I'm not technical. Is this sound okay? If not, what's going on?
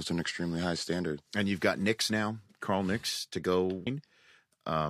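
No. At about 3.86 s, just after "to go", the likely cause is a stream segment skipped: one chunk of the stream failed to arrive and the player moved on to the next. You hear the speech suddenly jump ahead, with a small blip.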